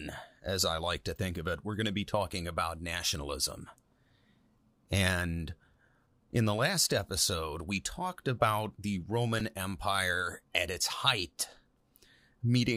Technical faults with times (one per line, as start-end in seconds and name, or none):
9.40 repeated buffer
10.83 repeated buffer